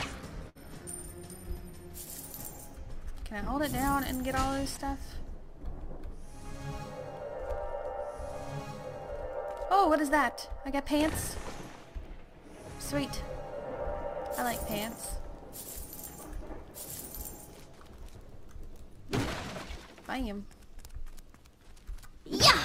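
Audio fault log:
0.49 to 0.57 s, burst of packet loss: about 60 ms of audio never arrived in time, so the receiver extended the preceding sound for roughly 56 ms while fading it down before playback jumped ahead. On a spectrogram the harmonics or noise smear flat and dim, then cut to new content.
4.75 s, short concealed packet loss: around 20 ms went missing and was patched by continuing the last sound, then blended back into the real signal, giving a brief smear or wobble. The waveform shows a short, overly regular stretch where fine detail briefly vanishes.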